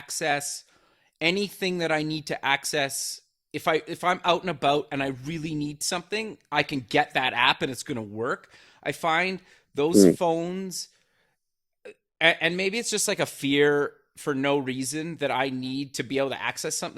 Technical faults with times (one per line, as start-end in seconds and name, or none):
4.09-8.09 adaptive stream at a lower bitrate